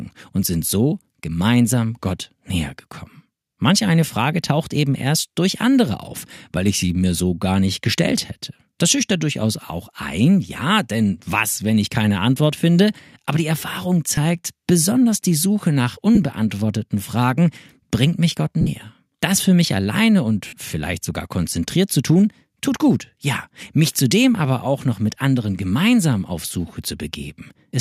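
Four short dropouts from lost LE Audio frames break up the audio at 14.15–14.18, 16.15–16.18, 18.61–18.68 and 20.47–20.53 s, lasting roughly 23, 15, 53 and 53 ms. In each gap the LC3 decoder's concealment repeats the last spectrum with scrambled phase, so tonal parts blur into a brief noisy smear. On a spectrogram, harmonic lines turn into short noisy, fading smudges. The waveform shows ragged noise-like patches instead of clean periodic cycles.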